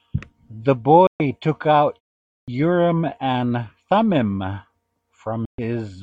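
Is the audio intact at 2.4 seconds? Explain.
No. At 2.44 s there is a clipped start after a pause. After about 0.52 s of silence, the speech comes back abruptly. Its opening 38 ms is missing, up to 2.48 s. The output device goes to sleep during the quiet gap. It needs a moment to wake and lock again, so the first sounds of the resumed speech are swallowed. The onset seems to jump straight in without its natural beginning.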